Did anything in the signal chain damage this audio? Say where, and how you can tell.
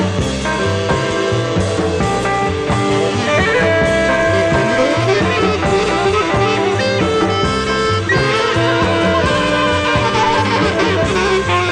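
Yes, at the Bluetooth codec stage: an SBC bit pool drop from 1.87 to 4.96 s and again from 11.40 s to the end. Treble dulls and gritty noise rises, consistent with the bit pool falling from 28 to about 13, starving upper sub-bands and coarsening quantisation.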